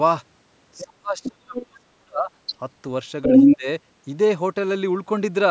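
From 0.78 s, brief scraps of the other side's voice leaking through appear at 0.78, 1.23, 1.56 and 2.47 s, roughly 10 to 15 dB below the talker. A longer stretch from 3.22 to 3.56 s rises about 10 dB above the talker. A second voice underneath marks the echo canceller as the likely cause, not room reverb.

From 0.85 to 2.3 s, and again from 3.26 to 3.67 s, speech is suppressed in double talk. The talker's level sinks, at worst by about 35 dB in the first span and much less in the second. The likely cause is the canceller turning everything down while both sides speak. The drops track the overlap rather than cutting cleanly, as network dropouts would.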